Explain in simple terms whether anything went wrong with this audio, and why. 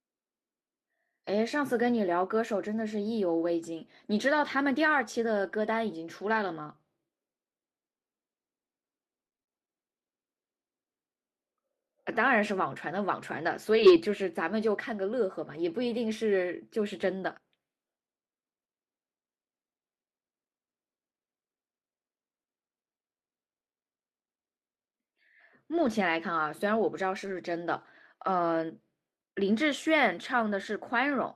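A few short moments sound rough and grainy rather than clean: 5.43 to 5.53 s, 6.33 to 6.35 s, 13.74 to 14.00 s, 25.74 to 25.88 s and 27.24 to 27.34 s. Each is a lost packet rebuilt from error correction. Bits of the audio went missing on the way, but a cheap backup copy had been tucked into the next piece, so the player used that instead. Nothing drops out, but those 20 to 140 ms sound coarser and noisier.

From 9.25 to 9.51 s the sound turns choppy and robot-like, with small pieces missing. This is repeated packet loss. Six gaps arrived in a quarter of a second, the longest about 26 ms. Each time, the player stretched the last sound to cover the hole, and about half of that stretch ends up being this patched-in filler.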